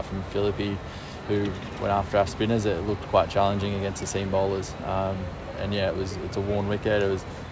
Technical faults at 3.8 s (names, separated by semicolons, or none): none